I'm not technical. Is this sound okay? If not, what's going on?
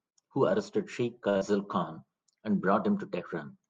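No. At about 1.29 s there is a short stall from a late packet: a piece of audio arrived late, so the call software stretched the last sound for about 60 ms, then carried on. Nothing is lost here; the sound just hangs briefly.

Straight after, from 1.37 to 1.43 s, comes a short concealed packet loss. About 40 ms of audio never arrived at all, and the software filled the gap with a guess. Unlike the stall, something is missing, so it sounds more like a quick smear or blip.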